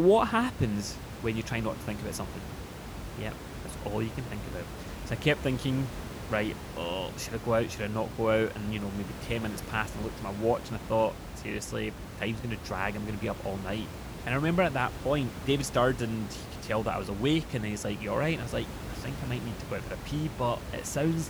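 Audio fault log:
No faults heard anywhere in the speech.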